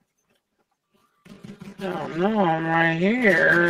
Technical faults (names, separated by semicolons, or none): channel delay (comb filtering); time-stretched section